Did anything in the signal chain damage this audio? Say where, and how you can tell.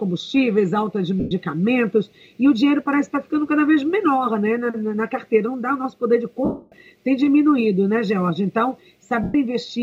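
Yes, there are lost LE Audio frames on the Bluetooth link, so the damage happens in the wireless transport and the LC3 codec's concealment. Three gaps show it: 1.20 to 1.31 s, 6.45 to 6.72 s and 9.23 to 9.35 s. The short gaps last about 112 ms and the middle one about 270 ms, which fits runs of 7.5 ms frames dropping out. In each gap the decoder replays the last spectrum with scrambled phase, so the sound smears into noise, and the long middle gap fades away toward silence.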